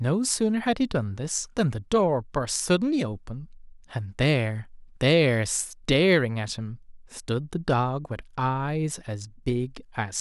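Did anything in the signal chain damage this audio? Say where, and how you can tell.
No, nothing in the signal chain left audible damage on this speech recording. Listening at every stage from capture through playback turns up nothing that points to a fault.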